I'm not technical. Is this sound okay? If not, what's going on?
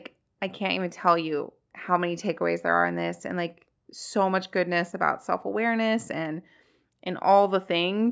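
Yes, this sound is okay, and the missing lowest bass is just the normal effect of call microphone processing.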